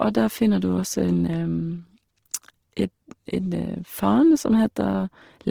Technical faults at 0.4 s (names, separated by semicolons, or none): Opus compression